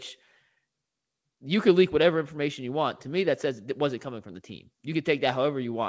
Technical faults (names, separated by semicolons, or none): none